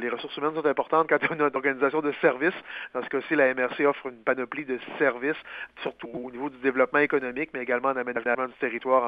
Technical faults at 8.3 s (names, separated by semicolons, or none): frames out of order